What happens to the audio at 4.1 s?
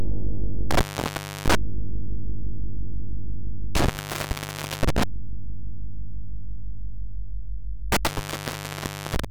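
A loose connection opens in an intermittent contact from 3.75 to 5.03 s, cutting the sound for about 0.87 s with crackle at the edges and faint hiss underneath.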